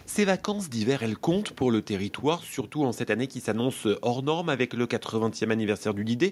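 No technical faults are audible.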